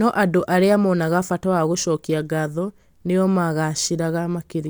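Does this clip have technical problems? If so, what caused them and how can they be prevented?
No, there are no technical problems to address here.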